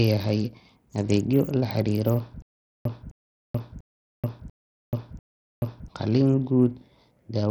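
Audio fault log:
Throughout: Bluetooth SBC compression. The speech has the gritty, grainy texture and unsteady treble of heavy SBC coding, likely from a low bit allocation around 64 kbps. The encoder divides the signal into a few broad sub-bands and starves the weaker upper ones of bits, so high detail flickers in and out while coarse quantisation of the remaining bands leaves a rough noise and aliasing riding on the voice.
2.42 to 5.88 s: stutter with silent gaps. A fragment of about 260 ms plays, then about 432 ms of dead digital silence follows, and the pair repeats five times at a steady cycle of roughly 0.69 s. This likely comes from a stalled stream or player that replays its last buffered piece on each retry before running dry, so whatever speech belonged in that stretch is simply missing.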